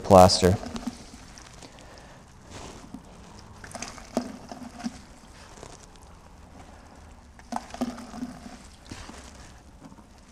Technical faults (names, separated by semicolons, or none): filter restarted on every block